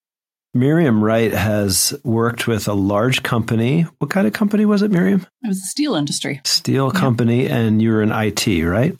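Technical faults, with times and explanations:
Nothing here jumps out as a technical fault; the speech comes across steady and intact the whole way.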